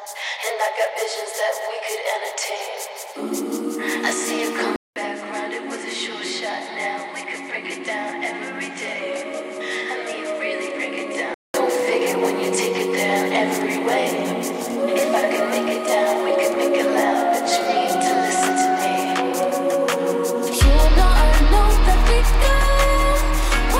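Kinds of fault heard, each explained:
Input switched to a poorer device: after a 200 ms gap, 4.76 to 11.54 s has nothing above 11.4 kHz, about 10 dB less level and new background noise roughly 30 dB down, likely another microphone; a plain filter would not shift level and noise together.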